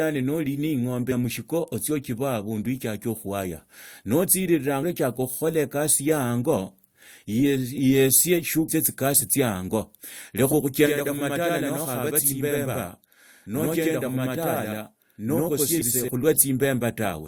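Damaged data in a compressed stream at 8.67 s: a corrupted stretch of the encoded speech makes the decoder misread its frames and lose sync, and the hunt for the next valid frame header comes out as a brief blip.

Channel delay (doubling) from 10.86 to 16.08 s: one channel runs about 85 ms behind the other, which fits a 4096-sample buffer. Summed to mono, the late copy sounds as an equally loud slap echo trailing the speech.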